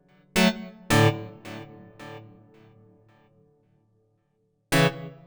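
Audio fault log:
Throughout: stereo read as mono. The sound runs at half speed, 0.5 times normal, and sits a full octave low, 12 semitones down. The player has taken interleaved left and right samples as one channel. Each stereo frame becomes two mono samples. At the intended rate, everything takes twice as long. Alternating samples from two channels add a faint mirrored copy of the sound in the upper half of the spectrum.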